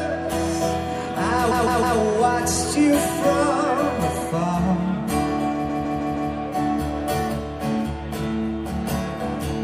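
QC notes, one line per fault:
1.51–1.98 s, repeated frames: a block of about 157 ms, which fits a run of six compressed frames, is played four times in a row. The decoder receives the same frames again and again, so that slice of sound stutters, and the audio runs about 0.47 s longer.
5.68–6.31 s, repeated frames: the same kind of 157 ms block, five plays in total, loops the sound again. The stutter is longer here and adds about 0.63 s to the clip.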